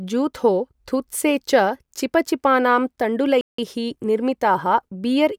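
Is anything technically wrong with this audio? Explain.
Yes, there's a playback stall in this speech clip. At 3.41 s the audio just drops out and stays silent for about 0.17 s, until 3.58 s, then picks up again. The cause is likely the player running dry of data or its thread getting blocked for a moment.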